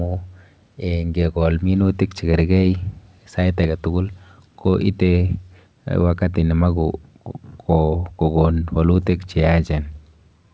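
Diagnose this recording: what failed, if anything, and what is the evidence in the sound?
Nothing failed here; the speech carries the expected sound of a working WebRTC call path, with nothing above 8 kHz.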